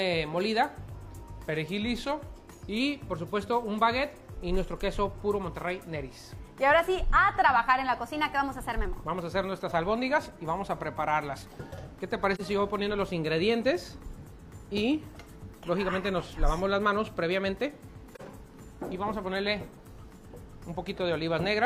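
From 1.08 to 2.80 s the sound slows about 5.7% and drops roughly a semitone, then from 7.98 to 8.85 s speeds up 5.7% and rises about a semitone, likely a drift correction step in clock-matching software. At 12.35 to 12.41 s and 18.14 to 18.21 s there's AAC frame loss with muting: soft-edged gaps of about 43 ms, which fits losing a single frame each time.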